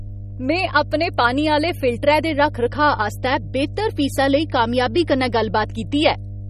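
Mains hum runs through the whole speech clip: power-line interference, probably from a ground loop or nearby transformer, adds a steady low 50 Hz drone with some low harmonics. At roughly 10 dB below the speech, it sits under the speech throughout.

Likely MP3 compression also affects the entire clip. The codec damage is plainly audible, and the starved bit budget points to a low rate, around 32 kbps. Nothing survives above 15.1 kHz, and weak spectral detail flickers in and out, giving a watery, swirly texture with smeared consonant attacks.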